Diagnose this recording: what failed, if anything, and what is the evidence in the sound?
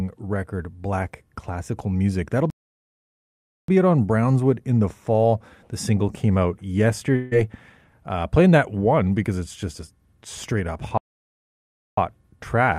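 Playback stall: the speech stops dead at 2.50 s and at 10.98 s, with silence lasting about 1.18 s and 1.0 s, then resumes exactly where it stopped. That points to the playback stage, likely a starved buffer or blocked player thread. Nothing is lost and no fill is heard, which separates it from a network dropout.

Long network dropout: from 7.16 s to 7.33 s about 160 ms of speech is missing. The receiver bridges the gap by continuing the last sound as a fading buzz, with no silent stretch, and speech returns further on without the lost part. The likely fault is packet loss on the network path, not a playback stall.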